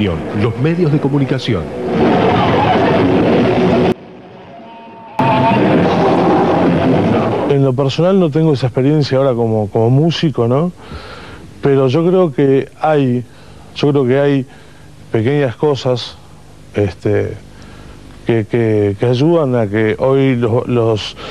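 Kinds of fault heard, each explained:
One channel inverted: from 3.92 to 5.19 s the sound drops by about 23 dB. The likely cause is one stereo channel arriving with reversed polarity, so that when the two channels are summed to mono, everything common to both cancels. Only the small difference between left and right survives, leaving a faint residue for that stretch.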